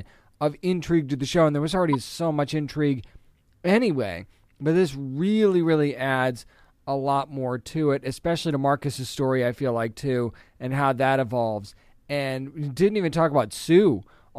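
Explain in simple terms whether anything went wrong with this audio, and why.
A corrupt frame decoded at 1.93 to 1.95 s, between "show and there was" and "so much intrigue anyway", causes a brief chirp, squeak, blip or burst of noise. A few compressed chunks of the speech arrived damaged, and the player decoded them anyway, putting sound at the wrong pitches.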